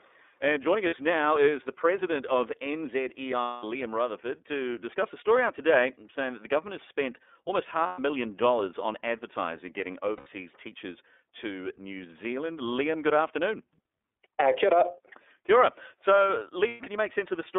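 From start to finish the speech passes through the iLBC codec, which fits its 13.33 kbps mode with 30 ms frames. Only a 300 Hz to 3.6 kHz band survives, so a spectrogram is empty above 3.6 kHz. The voice sounds plainly rough and synthetic.

Lost iLBC frames interrupt it at 0.86 s (60 ms, before "now is the president"), 3.41 s (210 ms), 7.86 s (120 ms, after "government has spent almost"), 10.17 s (90 ms, before "teachers to") and 16.68 s (120 ms). Each gap is filled with a repeated, noisy pitch cycle and sounds like a held buzzy vowel. On a spectrogram these show as smeared, periodic patches, and the voice is right again almost at once afterwards.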